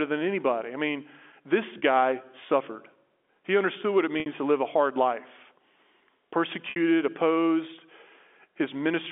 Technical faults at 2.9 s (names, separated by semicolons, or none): none